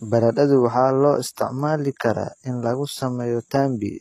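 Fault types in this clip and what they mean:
HE-AAC compression: plainly audible gritty, lispy treble throughout and nothing above 14.9 kHz, likely spectral band replication copying lower bands upward, which fits about 20 kbps.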